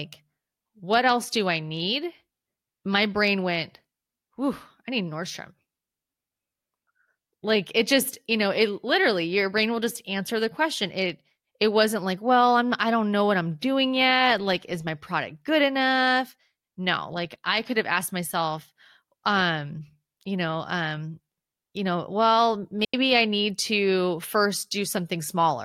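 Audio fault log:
22.85–22.94 s, digital wireless dropout: right after "um you know well" the speech cuts to near silence for about 89 ms, then picks up at "I need to". The receiver lost too much data and muted with a quick fade, so it's a clean hole with no noise burst either side.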